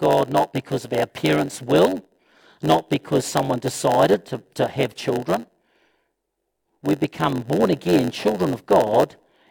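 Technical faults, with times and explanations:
Throughout, block size mismatch (padded): a steady buzz at about 92 Hz runs under the speech, and everything plays at about 0.92 times normal speed while the pitch stays roughly natural. Each block handed on is shorter than the block the next stage reads, so the remainder is filled with zeros. That leaves a tiny silent gap at the block rate, which produces the buzz, and the added silence stretches the timing. A resampling or clock-rate error would drop the pitch along with the speed, and random dropouts would not form a fixed-rate buzz.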